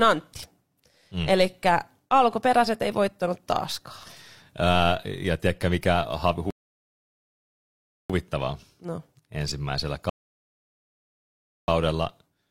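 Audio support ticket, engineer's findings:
Rebuffering stall, twice. Player buffer drained before the next chunk arrived; playback halted until data refilled. Speech drops to dead silence at 6.51 s, resumes at 8.10 s, about 1.6 s added. Repeat at 10.09 s to 11.68 s, again about 1.6 s. Resumes at the exact cut point both times: no audio skipped, timeline stretched. Probable component: network delivery or fetch scheduling starving the client buffer.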